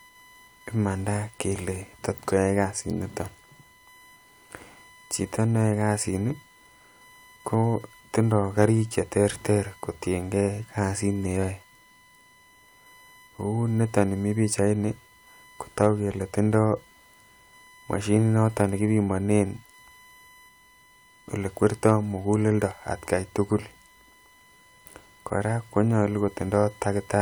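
USB whine runs through the whole of this speech recording: a steady tone at 1 kHz, loudest at its 2 kHz harmonic and roughly 30 dB below the speech. The USB bus's 1 ms frame timing draws current in pulses that leak into the audio path through shared power or ground. Hard clipping hits at 8.61 to 8.64 s, 15.81 to 15.87 s and 21.86 to 21.92 s, just before "mukuleldo atgai tukul". Peaks about 2 dB too large for a stage were cut flat, adding high harmonics heard as brief crackle.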